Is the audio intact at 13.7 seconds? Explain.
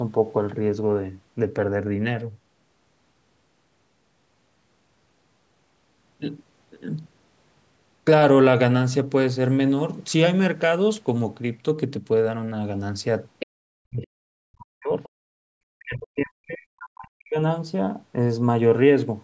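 No. At 13.7 seconds the speech sits inside a suppressed stretch running from 13.43 to 14.94 s, about one and a half seconds in all. The level falls away sharply, at its deepest by roughly 40 dB, so the talker nearly vanishes before recovering. This is speech suppressed in double talk: with both ends likely talking at once, the echo canceller could not tell this talker from returning loudspeaker echo and attenuated everything.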